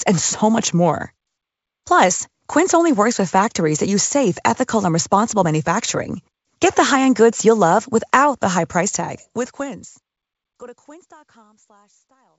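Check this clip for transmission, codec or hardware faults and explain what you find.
No transmission, codec or hardware faults are present in this speech. The G.722 wideband telephone coding at 64 kbit/s carries the voice up to about 7 kHz, and the smooth fade-out that begins at around eight and a half seconds ends at 12.4 s.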